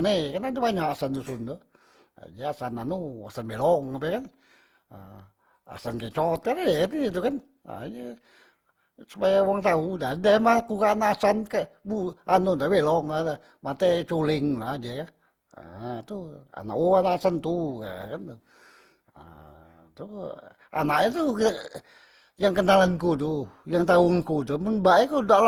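Throughout the speech, the sound is swirly, smeared and hollow, with blurred attacks and nothing above about 20.2 kHz, more damage than one encode explains. This points to generation loss, likely from around seven Opus passes near 48 kbit/s, each requantising on a shifted frame grid.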